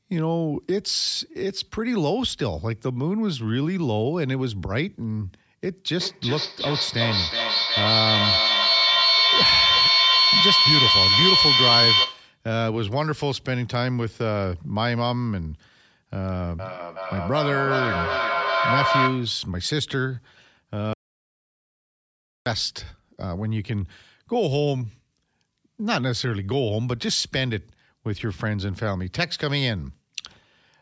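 From 5.86 to 12.46 s a feedback howl builds: two devices on the same call in one room let the microphone-to-loudspeaker loop gain on each pass, so the sound narrows to a tone near 4 kHz that swells to about 6 dB above the speech and pulses roughly every 400 ms. Unlike a fading echo, the repeats grow until the loop breaks. A second, lower howl near 1 kHz follows from 16.59 to 19.46 s, peaking about 3 dB over the speech with the same pulse.

From 20.93 to 22.46 s comes an audio dropout to silence: the speech cuts off mid-flow and about 1.5 s is lost, likely because the input dropped while silence kept being written. The gap holds no room tone at all, which separates it from a mute gate or a quiet pause.

The call microphone processing caps the audio at 8 kHz and trims the lowest bass.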